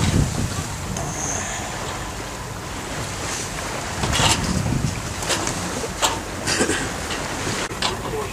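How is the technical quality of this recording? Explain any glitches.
There is one glitch: a short stretch of block size mismatch (padded) from 6.42 to 7.28 s. One processing stage writes blocks slightly shorter than the next stage reads, and the remainder of each block is filled with zeros. A brief silent gap therefore lands in every block, producing a rough 43.1 Hz buzz, which fits 1024-sample reads. Because of the inserted gaps, the audio runs at 0.938 times normal speed while keeping roughly its normal pitch. A waveform would show regular flat dropouts, and a spectrogram would show thin vertical stripes spaced evenly through that section.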